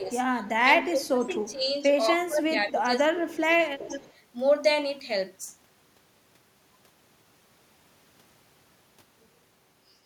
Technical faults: speech suppressed in double talk; echo leak

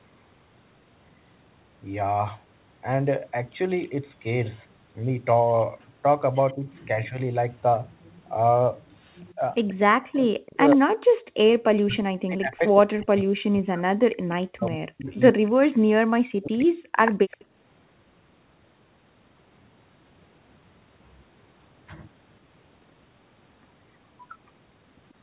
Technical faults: echo leak; speech suppressed in double talk

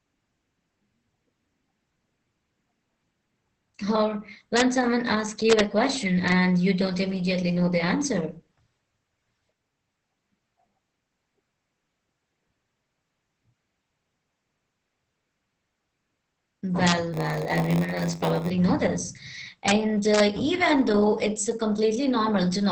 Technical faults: Opus voice compression; integer overflow; block size mismatch (padded)

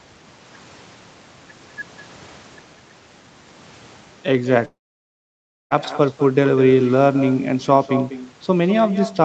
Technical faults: echo with no canceller; long network dropout

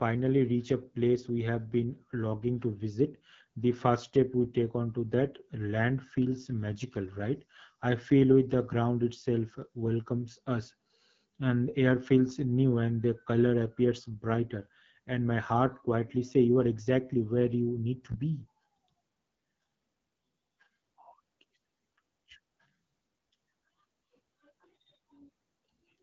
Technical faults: AMR wideband (HD Voice) codec

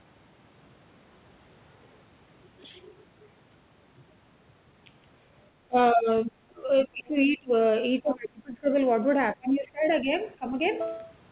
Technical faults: speech suppressed in double talk

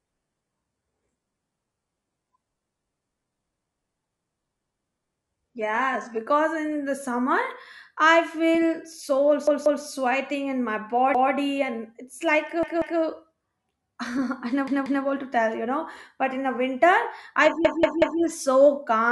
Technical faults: adaptive stream starting at a low bitrate; repeated buffer

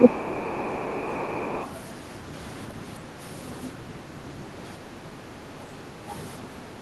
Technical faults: speech suppressed in double talk; other side's voice leaking through

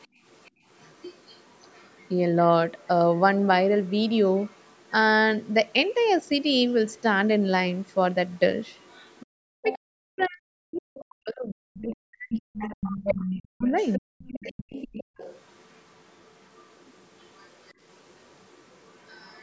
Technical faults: other side's voice leaking through; background gated by the echo canceller; speech suppressed in double talk

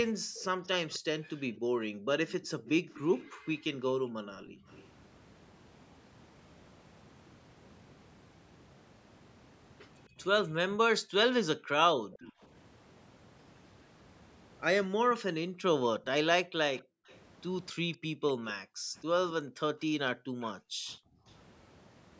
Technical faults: background gated by the echo canceller; echo leak

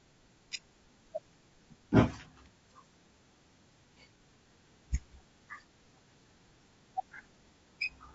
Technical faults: low-delay AAC compression; AAC frame loss with concealment

